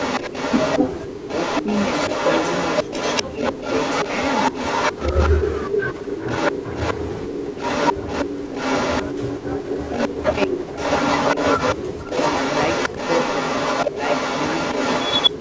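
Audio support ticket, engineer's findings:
Echo leak, throughout the clip: a delayed copy of the speech trails about 240 ms behind, at roughly 5 dB above the direct speech. Likely an incomplete echo canceller on a loudspeaker endpoint, letting pickup from the loudspeaker return to the sender.

Speech suppressed in double talk at 0.79–1.67, 2.83–3.6, 5.11–8.54, 9.21–10.78, 11.75–12.08, 12.9 and 15.3 s to the end: the speech drops by around 10 to 20 dB in pieces. Likely an echo canceller that cannot separate the local talker from the echo and attenuates both.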